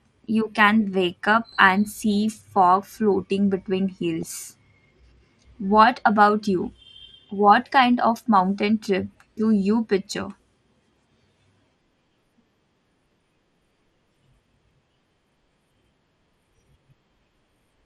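Throughout the speech, the audio was likely squeezed through MP2 compression at a rate that fits around 80 kbps. Too few bits per sub-band left upper bands switching off and the rest coarsely quantised, so the voice sounds dull, with a plainly audible gurgling graininess.

From 4.23 to 4.27 s, DAB burbling appears. A small trickle of bit errors, about 0.07 percent, slipped past error correction into a handful of frames, putting short blips of noise into single sub-bands.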